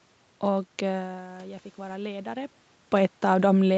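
From 0.93 to 2.61 s you get automatic gain rising: the level at the mic falls about 14 dB, and the gain control slowly adds about 4 dB, swelling voice and room noise together.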